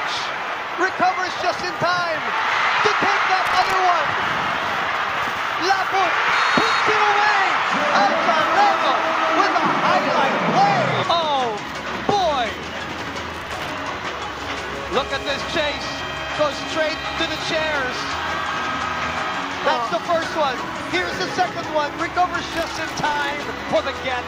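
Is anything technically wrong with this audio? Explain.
Yes. Processor overload crackle causes gritty tearing bursts at 3.46–3.73 s, 13.30–13.72 s and 22.49–23.48 s. Dozens of sub-millisecond buffers miss their deadlines and replay old audio with hard edges.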